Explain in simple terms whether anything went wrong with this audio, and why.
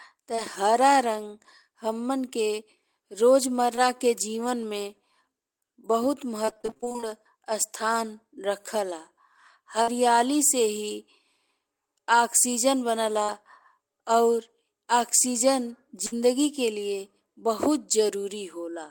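Twice near the start, at 0.35 to 0.40 seconds and again at 3.76 to 3.79 seconds, the speech gives a tiny smear or wobble lasting a couple of hundredths of a second. This is short concealed packet loss: a small piece of the call arrived too late, so the receiver covered the hole by stretching the last sound for about 20 ms, then blended back into the real speech.

From 6.45 to 7.04 seconds the speech turns choppy and robotic. This is repeated packet loss, producing robotic sound: over a dozen small holes, none longer than about 23 ms, followed each other in quick succession. Each was patched by continuing the previous sound, and together the patches fill roughly half of that stretch, so pieces of the speech are missing and the rest sounds mechanical.

At 9.82 to 9.89, 13.23 to 13.30 and 16.06 to 16.14 seconds, the speech briefly holds a buzz or fading hiss and then jumps ahead. Each of these is a burst of packet loss: a run of audio about 40 to 60 ms long never arrived in time. 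The receiver continued the last sound and let it fade out, and when real audio resumed, the part in between was gone.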